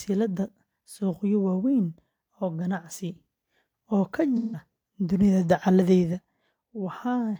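Speech, with AAC frame loss with concealment from 4.36 to 4.62 s: roughly 170 ms of frames went missing, likely four, and the decoder patched the gap by smearing the last good spectrum.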